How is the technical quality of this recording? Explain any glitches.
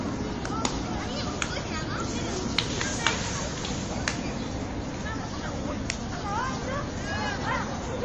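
The quality is poor. MP3 compression damage runs through the whole recording. From start to finish, nothing is present above about 9.8 kHz, so the top end sounds dull and boxed in. The damage is plainly audible. Quiet detail has a watery, swirling texture, bright moments pick up metallic chirps, and sharp attacks are smeared. The likely cause is MP3 encoding starved of bits, which fits a low bitrate near 32 kbps. To save bits, the encoder cuts off the treble at a fixed point. It also drops weak frequency components, and these flicker on and off from frame to frame.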